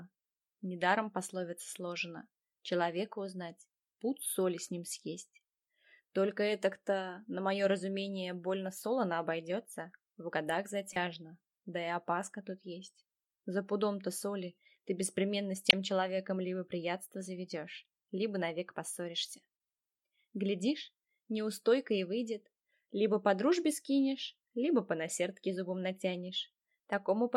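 Two devices in the chain were likely running on unsynchronised clocks, with a mismatch of roughly 40 parts per million. Each time that drift added up to a whole sample, a single sample was dropped or repeated. From 0.13 s to 27.32 s this produces clock slip clicks: about fifty faint ticks at a steady interval of roughly half a second. They are most noticeable where the sound is loud or sustained.

Compressed frames were decoded and played even though their data had been corrupted, so misread gains and codes put energy at the wrong frequencies. The first corrupt frame decoded runs from 10.93 s to 10.96 s. It sounds like a brief blip peaking at about −25 dBFS, and its length points to two damaged frames. The second, from 15.70 s to 15.73 s, fits a single frame but is far louder. It is a sharp burst peaking at about −5 dBFS.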